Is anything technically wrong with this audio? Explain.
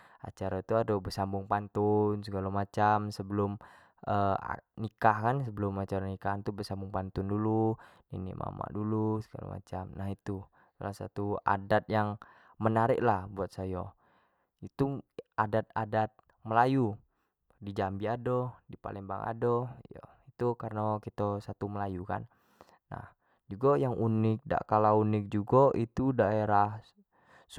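No technical faults are audible.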